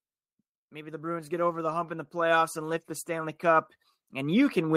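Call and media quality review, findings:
Automatic gain rising from 0.71 s to the end. Voice and background swell together over several seconds. AGC judged input too quiet and raised its gain gradually.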